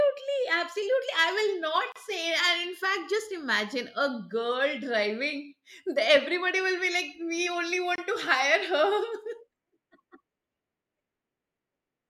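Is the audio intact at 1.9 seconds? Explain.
No. Separately encoded pieces were joined at 1.92 s without trimming encoder delay and padding, leaving a 35 ms silent gap, smeared at its edges, before the speech resumes at 1.96 s.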